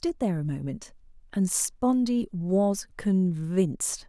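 No technical faults are audible.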